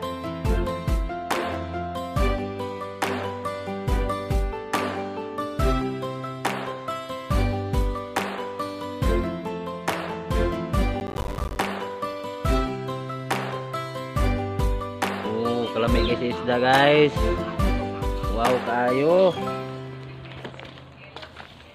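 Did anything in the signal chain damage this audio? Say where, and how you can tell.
Yes. Processor overload crackle sits at the driver and buffer stage, from 11.0 to 11.6 s. A burst of gritty crackle rides on the sound, made of many tiny silent gaps with hard edges. That fits roughly 10 ms buffers repeatedly missing their deadlines while the processor was overloaded, dozens of them over that short stretch.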